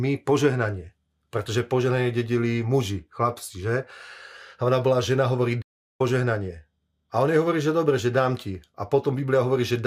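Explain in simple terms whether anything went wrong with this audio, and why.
Right after "ona bola žena hovorí", the speech cuts out at 5.61 s and there is dead silence until 6.01 s, a gap of about 0.38 s, before the talking carries on. This is a playback stall. The player most likely ran short of audio data, or was briefly held up by something else the device was doing, so it had nothing to send to the speakers until it caught up again.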